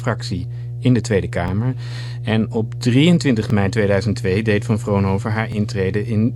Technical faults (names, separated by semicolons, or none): mains hum; overlapping chunks